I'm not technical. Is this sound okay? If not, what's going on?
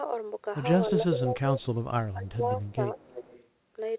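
No. From 0.91 to 1.61 s and 2.13 to 2.98 s the voice dips and fades in pieces: speech suppressed in double talk, likely because both sides spoke at once and the call turned the talker down.

There is also echo leak: a faint delayed repeat of the voice, about 0.31 to 0.35 seconds late, at 1.22 to 1.32 s, 1.61 to 1.65 s, 2.70 to 2.74 s, and most clearly 2.98 to 3.48 s. This is likely a loudspeaker on the other end being picked up again. Echo adds an extra copy of the voice, while the suppression takes the voice away.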